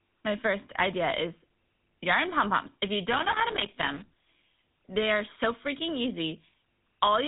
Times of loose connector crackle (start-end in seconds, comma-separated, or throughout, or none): 3.13-4.44